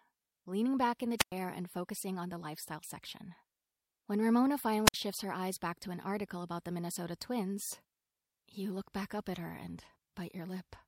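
At 1.18 s the speech breaks up in a wireless microphone squelch dropout. The radio signal from the analogue FM transmitter fades. Hiss rises briefly. Then the receiver's squelch shuts the output, leaving near silence for about 105 ms. The speech returns at 1.32 s. The same fault recurs at 4.85 s. This time the hole lasts about 58 ms, and the speech is back by 4.94 s.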